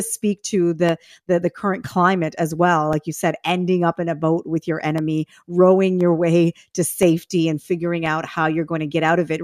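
From 0.89 s to 9.09 s, periodic USB or driver dropouts cut about ten brief gaps, each roughly a millisecond of silence, every 1.02 s. They tick only while speech sounds, and their clockwork regularity separates them from random crackle or isolated clicks.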